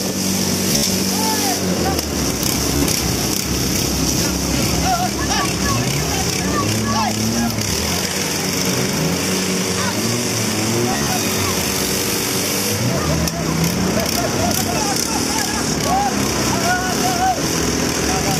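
Bluetooth stutter occurs at 0.69–0.88 s, 2.76–2.85 s, 10.93–11.10 s and 17.39–17.42 s. Wireless packets were lost or late, so the receiver kept replaying its last slice, about 14 ms long. This produces a buzzy, machine-gun repeat of roughly 100 ms at the first spot, 112 ms at the third, 56 ms at the second and a single hiccup at the last. The audio then resumes further on. A waveform shows identical tiled cycles, and a spectrogram shows vertical striping at the repeat rate.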